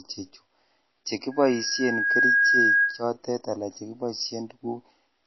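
From the start and throughout, the speech is band-limited with nothing above 5.8 kHz and has a plainly audible watery, swirling texture, likely MP3 compression at a low bitrate around 24 kbps. Weak frequency lines flicker between frames, unlike the steady dullness of a simple low-pass filter.

From 1.31 s to 3.04 s, a loudspeaker feedback squeal sits at 1.6 kHz. Microphone and loudspeaker formed a loop with gain above one at that frequency. The tone swells over roughly a second to about 10 dB above the speech, which sets it apart from a constant interfering tone that starts at full level.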